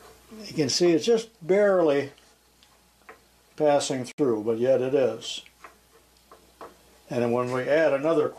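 Separately encoded pieces of this audio were joined without trimming the encoder's start-up delay and last-frame padding, and that leftover silence produces a gap at a join of encoded pieces. A hole of about 64.5 ms opens in continuous sound from 4.12 s to 4.18 s. Its edges are smeared by the codec, and the sound resumes where it stopped. Joins recur every 6 s, so only this one falls within the clip.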